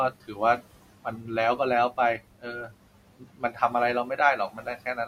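A short speech recording carries noise-suppression processing across its whole length, with the background pumping down in the gaps and back up under the talking: noise suppressor artifacts, from a suppressor that attenuates bands it judges to be steady noise frame by frame. That background is room noise sitting about 17 dB under the speech. Parts of the speech itself sound swallowed and faint at 0.10–0.41 s, 0.57–1.30 s, 2.18–3.74 s and 4.37 s to the end, dropping by about 18 to 19 dB at worst. This is speech cut by the noise suppressor, which mistook quieter speech detail for noise and turned it down with the background.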